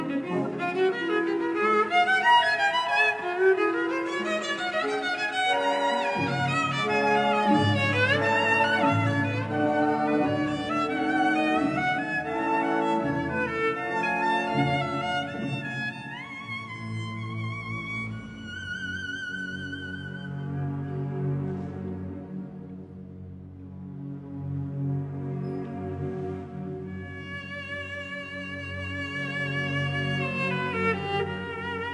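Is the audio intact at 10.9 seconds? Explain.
No. At 10.9 seconds the clip is affected by a wrong sample rate, which runs through the whole recording. The samples play back slower than they were captured, with no conversion, so everything runs at 0.667 times normal speed and drops about 7 semitones. That ratio fits audio recorded at 48 kHz being played at 32 kHz. What separates this from a plain pitch shift or a time-stretch is that pitch and tempo fall together, by the same ratio, with no processing artefacts.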